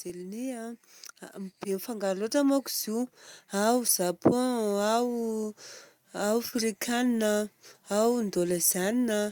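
From 1.32 s to 3.81 s the whole speech recording swells steadily louder, voice and room noise rising together by about 7 dB. That is automatic gain rising: the gain control judged the input too quiet and ramped its gain up over those two and a half seconds.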